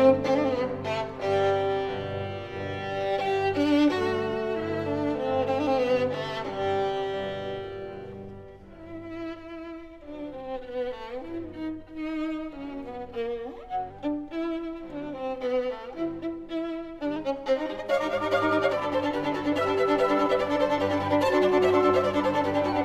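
From 11.45 to 13.90 s the audio suddenly drops about a semitone in pitch (104 cents) and slows by 5.82%, then returns to its normal rate. From 17.16 to 18.73 s it jumps the other way, about a semitone sharp (97.9 cents) and 5.82% fast. Because speed and pitch move together in a single step, the likely cause is a drift correction step, where clock-matching software abruptly changed the playback rate to refill or drain its buffer.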